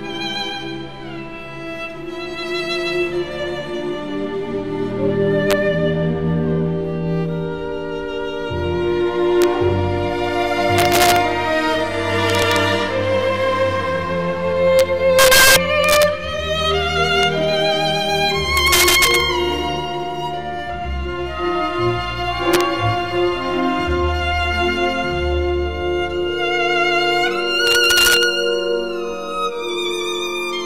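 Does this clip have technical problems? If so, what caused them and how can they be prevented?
Yes. Integer overflow runs through the whole clip: the signal has been pushed about 7 dB past full scale, and the peaks that go over don't clip, they wrap around to the opposite extreme. Only a small fraction of samples, under half a percent, cross the limit, but each one jumps the full range, so every loud moment snaps with a harsh crack that's much nastier than ordinary clipping. To prevent it, do gain and mixing in floating point or saturating arithmetic, and leave headroom before converting to fixed-point.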